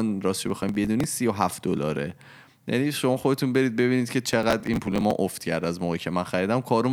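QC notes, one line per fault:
0.48–1.04 s: processor overload crackle. The processing could not keep up, and a long string of roughly 5 ms buffers was dropped. Each skip cuts a short hole in the speech with abrupt edges, and the close run of holes sounds like gritty crackle over the sound for about half a second.
4.29–5.11 s: processor overload crackle. The same failure happens again over about 0.8 s, with roughly twice as many skipped buffers. The tearing is denser and lasts longer, and it stops when the load drops.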